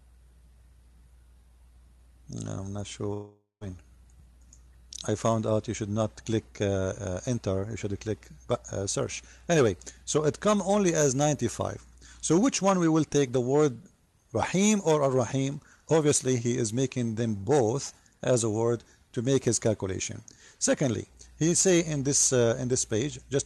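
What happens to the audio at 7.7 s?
Nothing goes wrong at 7.7 s: the audio is intact there, carrying only the ordinary character of the call path it passed through, with no dropout, glitch or distortion at that moment.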